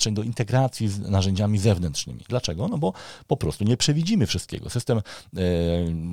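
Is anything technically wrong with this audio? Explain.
Yes. Three sharp single clicks occur in this speech, at 0.37 s, 3.63 s and 4.55 s. Each is most likely caused by dropped samples: a fraction of a millisecond of the stream goes missing, so the waveform jumps straight from one value to a later one. The gap is far too brief to remove any audible sound, but the sudden step is heard as a click and would show as a thin vertical line across the spectrum.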